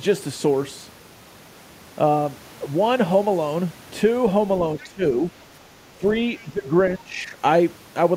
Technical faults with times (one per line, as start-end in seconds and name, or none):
4.79-5.03 speech suppressed in double talk
4.80-4.84 other side's voice leaking through
5.95-6.05 speech suppressed in double talk
6.39-6.43 other side's voice leaking through
6.42-6.68 speech suppressed in double talk
6.99-7.37 speech suppressed in double talk